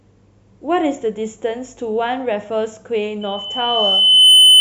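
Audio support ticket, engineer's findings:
Mic-speaker loop gain above one at 3 kHz. Loudspeaker feedback squeal from 3.21 s to end; tone swells over about a second to about 15 dB above speech.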